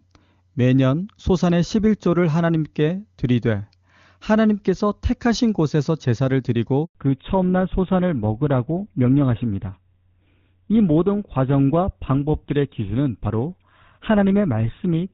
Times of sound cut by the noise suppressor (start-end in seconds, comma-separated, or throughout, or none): none